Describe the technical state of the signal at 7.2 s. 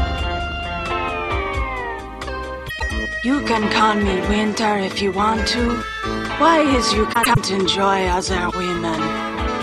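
At 7.2 s the signal is inside a frames out of order fault spanning 7.13 to 7.37 s. Two adjacent blocks of about 104.5 ms each, which fits runs of four codec frames, were decoded in swapped order, so the later material plays before the earlier. The result is a brief garbled flutter. No time is lost, and the timeline after 7.37 s stays aligned.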